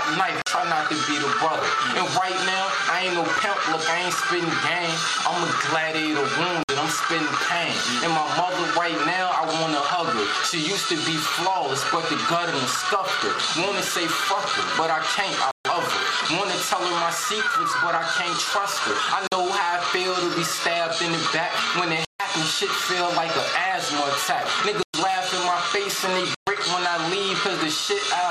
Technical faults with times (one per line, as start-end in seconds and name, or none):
0.42-0.46 block of digital silence
6.63-6.69 block of digital silence
15.51-15.65 block of digital silence
19.27-19.32 block of digital silence
22.05-22.20 block of digital silence
24.83-24.94 block of digital silence
26.35-26.47 block of digital silence